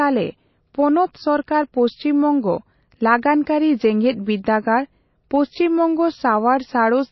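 From start to finish the speech has a watery, swirly texture with nothing above 5.8 kHz, likely MP3 compression at a low bitrate, around 24 kbps, starving the encoder of bits.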